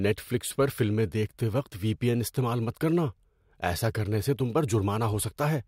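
No technical faults can be heard anywhere in the recording.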